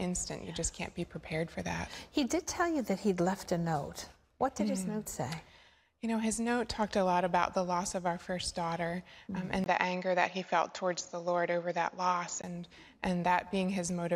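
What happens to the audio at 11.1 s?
Input switched to a poorer device, 9.64 to 12.44 s: likely a narrower-band microphone took over, so after a 20 ms gap nothing above 7.2 kHz remains, dulling the sound.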